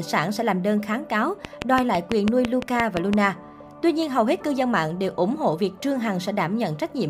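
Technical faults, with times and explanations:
1.45 to 3.14 s, train of clicks: a steady ticking sits over the sound for nearly two seconds, about ten sharp pops of the same shape arriving at an even pace of roughly 5.9 per second and standing well above the audio, around 20 dB louder at their peaks. Because the pulses are alike and regularly spaced, they come from something repeatedly injecting a spike into the signal, likely electrical interference from nearby equipment or a faulty connection or power supply.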